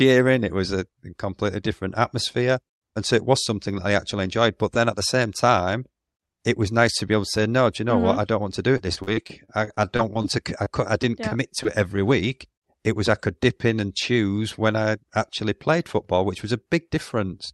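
Repeated packet loss (robotic sound) runs from 8.77 to 10.26 s. About a dozen holes, the longest 41 ms, were each patched by extending the preceding speech, so roughly 18% of that stretch is filled-in sound that comes across as choppy and robotic. Short concealed packet loss follows at 10.64 to 10.68 s and again at 11.63 to 11.67 s. Each time, about 20 ms of audio went missing, which fits a single lost packet, and was bridged by continuing the previous sound. The result is a brief smear or wobble in the speech. Both faults sit on top of a call path whose top end stops near 12 kHz, consistent with Opus at a moderate bitrate.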